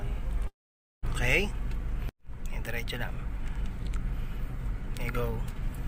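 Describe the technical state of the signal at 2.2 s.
At 2.2 s the signal is intact, with no dropout, click, distortion or other fault audible at that moment.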